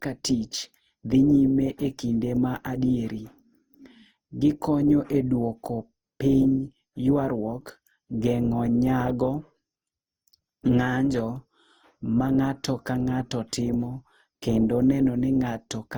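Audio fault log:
Throughout: generation loss. The speech sounds swirly, hollow and smeared, with blurred consonant attacks and little content above 20.5 kHz, which fits an Opus stream near 48 kbit/s. The likely cause is re-encoding around seven times, each pass adding fresh quantisation noise.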